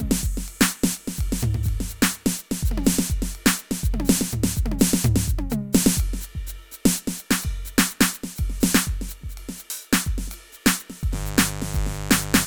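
From 11.10 s to the end, mains buzz enters under the music. Switching spikes from the 50 Hz supply leak in twice per cycle, spreading harmonics into the kilohertz range. It sounds like a steady, raspy buzz, about 10 dB below the music.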